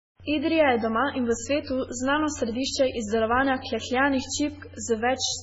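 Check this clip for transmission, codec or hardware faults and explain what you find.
One fault runs through the whole speech clip: heavy damage from what is likely MP3 compression, at a level that fits a very low bitrate around 16 kbps. Starved of bits, the encoder discards everything above 7.6 kHz and zeroes weak frequency lines, which flicker on and off between frames. The result is dull, watery, swirly speech with smeared consonants. A spectrogram shows a flat ceiling at 7.6 kHz and patchy, blinking holes below it.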